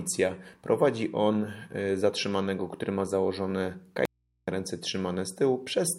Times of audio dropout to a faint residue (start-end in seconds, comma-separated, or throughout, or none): 4.05-4.48